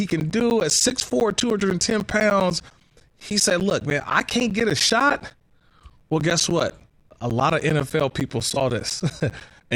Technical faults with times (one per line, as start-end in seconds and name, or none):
0.10-9.71 periodic USB or driver dropouts